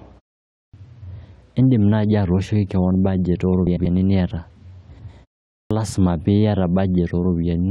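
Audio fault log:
0.55–0.74 s and 5.51–5.71 s, clipped start after a pause: the output device dozes during the 0.43 s and 0.34 s silences and needs time to wake, so speech resumes abruptly, its onset swallowed: 186 ms lost first, then 197 ms just before "lazima piata".
3.67–3.86 s and 4.89–5.09 s, frames out of order: two adjacent blocks of about 93 ms each, which fits runs of four frames, were decoded in swapped order, so each stretch plays halves exchanged, a garbled flutter, though no time goes missing.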